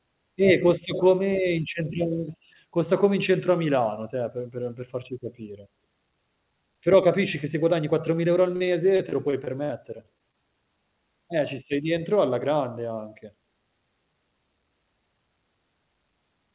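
Speech heard through narrowband call audio, with nothing above 4 kHz, which fits a G.711-style telephone codec. From 8.56 to 10.35 s there is repeated packet loss with a robotic sound. About a dozen short holes, the longest 45 ms, are each patched by stretching the preceding sound, so roughly 15% of that stretch is filler. A single dropout would leave one gap, but here the patches recur in quick succession, giving choppy sound with pieces missing.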